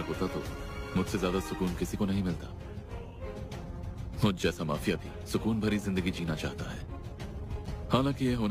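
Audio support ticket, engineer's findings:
No audible faults found in this recording.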